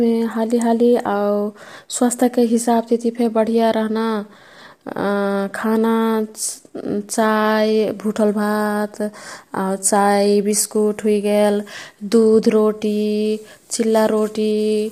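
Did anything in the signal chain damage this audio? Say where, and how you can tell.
Yes, at the codec stage, throughout the speech: a rough, grainy texture, which is likely low-delay AAC compression (AAC-ELD), fitting a rate around 32 kbps. Its short frames smear pitch harmonics, so a spectrogram shows noise filling the gaps between harmonic lines.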